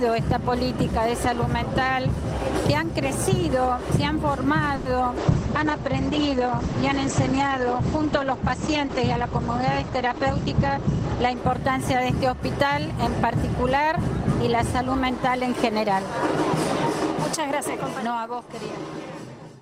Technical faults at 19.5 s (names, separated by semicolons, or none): none